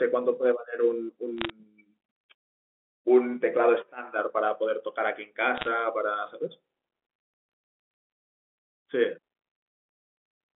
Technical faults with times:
1.38-1.50 bit errors on a digital phone line
5.57-5.68 bit errors on a digital phone line

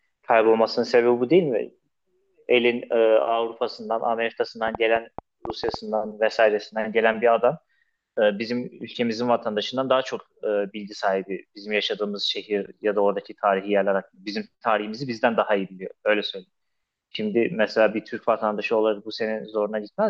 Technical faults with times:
4.68-5.75 train of clicks

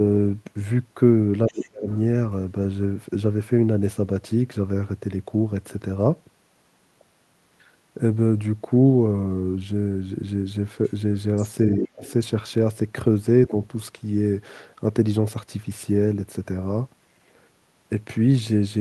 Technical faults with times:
1.48-1.97 other side's voice leaking through
1.48-1.88 speech suppressed in double talk
10.84-10.92 other side's voice leaking through
11.36-11.43 other side's voice leaking through
11.78-12.04 speech suppressed in double talk
12.04-12.11 other side's voice leaking through

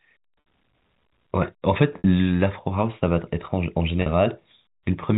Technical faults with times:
0.40-0.46 packet loss with pitch repetition
1.98-2.04 packet loss with pitch repetition
4.02-4.06 packet loss with pitch repetition

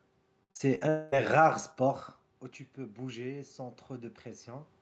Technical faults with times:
0.43-0.83 repeated packet loss (robotic sound)
0.89-1.14 long network dropout
2.77-4.77 automatic gain rising

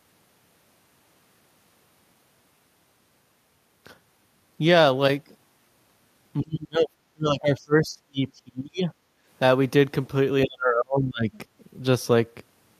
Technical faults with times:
6.41-8.92 speech suppressed in double talk
9.20-9.26 background gated by the echo canceller
10.44-11.31 speech suppressed in double talk

